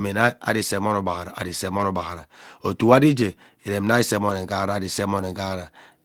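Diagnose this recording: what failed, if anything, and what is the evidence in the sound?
Network stage: a lost packet rebuilt from error correction at 1.77–1.79 s (after "emone ugbaghara ari saa"), 4.29–4.31 s (before "nghara ari") and 5.19 s. Each 20 ms packet was replaced by the low-bitrate copy in the next one. It sounds briefly rougher and noisier, with no gap or smeared repeat as concealment would leave.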